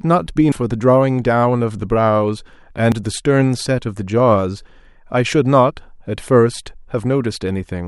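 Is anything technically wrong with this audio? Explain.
Yes. At 0.52 s and 2.92 s the speech jumps abruptly, skipping roughly a tenth of a second and then a few hundredths. The likely cause is a dropped buffer (overrun), where unread samples were overwritten and the neighbouring audio spliced together. Unlike a dropout, no silent gap appears.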